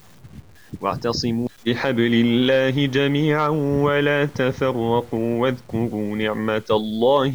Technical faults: low bit depth without dither

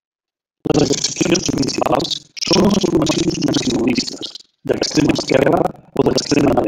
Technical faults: buffer tearing

